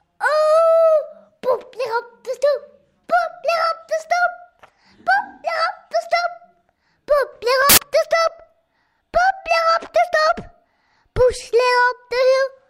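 Samples built from the wrong bytes, from 7.70 to 7.78 s: for about 80 ms the reader assembles each sample from mismatched bytes, whether shifted by one, swapped in order or misaligned. The rapidly fluctuating low-order bits end up as the most significant part of every value, so the real waveform is buried. The result is a brief burst of loud, harsh broadband noise cutting across the sound.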